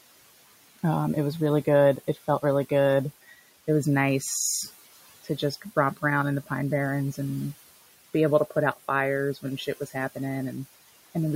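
Noise suppressor artifacts run through the whole recording: the steady room noise, sitting about 19 dB below the speech, is pulled down by about 16 dB between phrases and returns under the speech. A spectrogram shows the noise floor pumping with each phrase.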